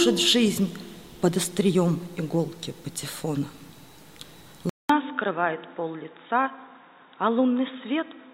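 At 4.69 s the audio drops out for 200 ms, then returns duller, boxier and about 5 dB quieter, with nothing above 3.8 kHz and a faint new noise floor, until the end. This likely marks the input switching to a poorer device.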